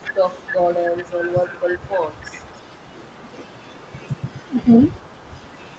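A speech recording with an echo leak from 0.0 to 3.33 s: a faint copy of the speech trails about 0.3 s behind, roughly 20 dB down, seen on a spectrogram as ghosted, offset harmonics, likely from a loudspeaker echo the far-end canceller missed. Speech suppressed in double talk dips the level at 1.07–1.14 s by around 10 dB and at 1.49–1.64 s by a few dB, showing as brief notches in the waveform envelope, likely because the canceller ducked both talkers together. The spectrogram tops out at 8 kHz, as the call path passes it.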